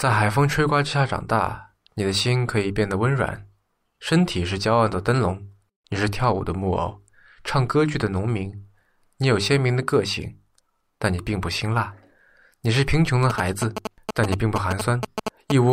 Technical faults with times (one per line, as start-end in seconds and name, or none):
13.30-15.52 GSM signalling bursts